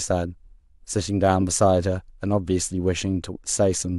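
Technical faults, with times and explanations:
No technical faults detected.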